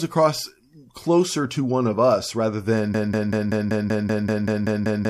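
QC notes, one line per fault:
2.94 s to end: broken-record loop. A 192 ms fragment repeats 11 times back to back. The stream likely stalled, and the audio that followed is lost.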